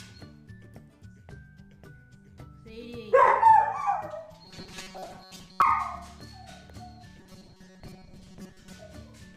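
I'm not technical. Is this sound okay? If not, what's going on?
No. Two stretches, from 4.46 to 5.62 s and from 7.20 to 8.73 s, turn into a hard, metallic buzz, which is robotic sound from repeated short buffers. The likely cause is audio arriving too slowly, so the player keeps replaying a tiny chunk, about 5 ms long, instead of fresh sound. That repetition sets a fixed 188 Hz buzz, and most of the real audio in those stretches is skipped, leaving only a rough outline.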